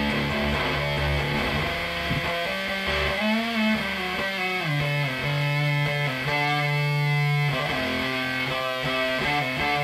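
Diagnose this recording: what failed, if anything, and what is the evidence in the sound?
No failure is audible at any stage of the chain, with nothing in the signal pointing to a wiring, converter, buffer, format-conversion, processing, network, storage or playback problem.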